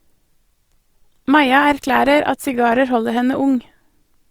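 An adaptive stream starting at a low bitrate opens this speech clip: the player began on a lean version of the stream to start quickly, then switched up once it had gauged the connection. From 0.0 to 2.81 s the treble sounds thin and partly synthetic, with stronger codec smearing, which fits an Opus encode around 24 kbit/s. At 2.81 s the quality jumps without any gap, consistent with roughly 64 kbit/s, and content then extends to about 20.2 kHz.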